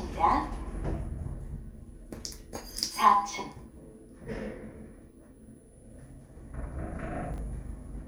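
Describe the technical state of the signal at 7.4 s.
Chunks out of order occur from 7.34 to 7.38 s. A 20 ms chunk of audio arrives one chunk late, so it plays after the chunk that should follow it. No audio is missing, but the two 20 ms pieces are swapped, creating three hard joins within about 40 ms. Each join is a discontinuity in the waveform. The result is a brief jumbled, garbled moment, just before the point asked about.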